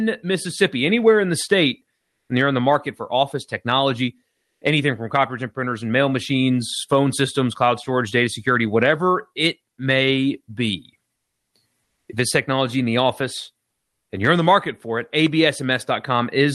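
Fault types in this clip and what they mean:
Comfort noise in place of the background: at 1.95, 4.31, 11.83 and 13.69 s, brief pauses become steady featureless noise, likely generated during Opus discontinuous transmission.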